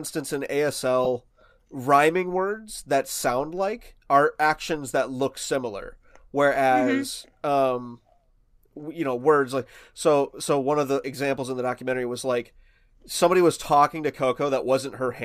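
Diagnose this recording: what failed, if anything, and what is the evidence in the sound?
Two brief grainy blips break the speech, at 1.05 s and at 6.55 s, right after "actions that look similar". These are lost LE Audio frames on the Bluetooth link. Each gap matches one 10 ms frame, which the likely LC3 decoder filled by reusing its last spectrum with randomised signs.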